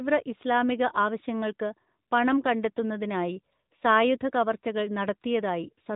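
From start to finish the speech carries the sound of the AMR narrowband mobile codec, and the damage is plainly audible. Everything above 3.8 kHz is gone, leaving a boxed-in, telephone-like tone. The codec rebuilds the voice from a vocal-tract model excited by sparse pulses, so it comes out buzzy and synthetic, a level that fits a mid-rate mode around 10.2 kbps. On a spectrogram, energy stops at a hard ceiling near 3.8 kHz.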